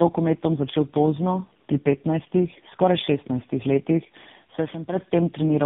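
Throughout the clip, the call appears to have passed through three low-rate speech codecs in succession, with plain telephone-band links between them, which fits a chain of GSM full rate, GSM full rate again, then AMR-NB at around 6.7 kbit/s. This is tandem speech coding: each coder re-encodes the previous one's already damaged output. The speech sounds rough, muffled and warbly, with nothing above 3.7 kHz.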